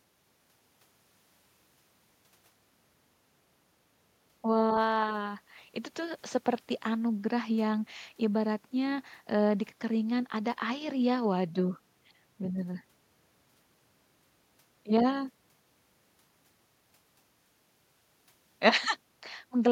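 No technical faults are audible.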